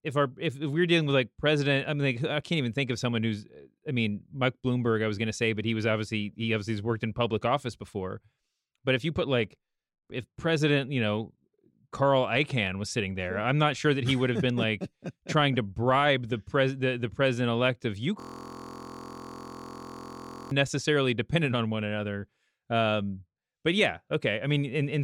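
Speech, with a system hang loop from 18.20 to 20.51 s after "the president elect of". A 23.22 ms slice, which fits a 1024-sample buffer, repeats about 100 times as a steady 43.1 Hz buzz. On a waveform this shows as identical repeating cycles, and on a spectrogram as evenly spaced harmonic lines.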